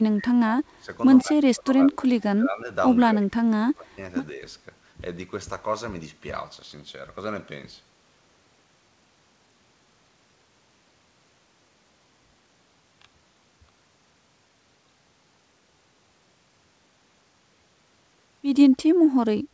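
Speech suppressed in double talk pulls the level down at 0–0.32, 0.6–0.9, 1.23–2.69, 3.06–4.0, 4.33–4.43 and 19.2–19.33 s, by roughly 5 to 30 dB. The waveform thins abruptly and the spectrogram goes pale, likely from an echo canceller ducking both talkers.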